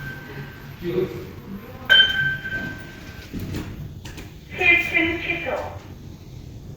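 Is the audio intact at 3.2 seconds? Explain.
No, there's a skip ahead at about 3.23 to 3.25 s. Around 400 ms of sound was dropped, either in transit or by an overflowing jitter buffer, so playback jumps forward with no gap, and the two sides butt straight together.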